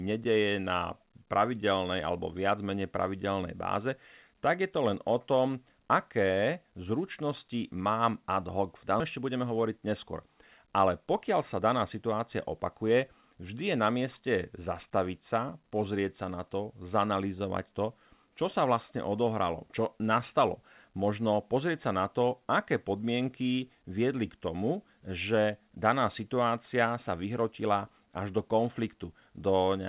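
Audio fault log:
9.0 s, skip ahead: Just after "ad hoc v" the audio jumps forward with no gap. About a second of speech is gone. A stretch of audio was dropped while later audio was already waiting, and the two sides are joined almost directly.
9.20 to 13.22 s, jitter buffer speed-up: For about four seconds the speech runs about 7% fast at the same pitch, up to "vždy je na mieste". The receiver trimmed short pitch-period pieces many times in a row, roughly 300 ms in total, to shed extra buffered delay. It sounds hurried.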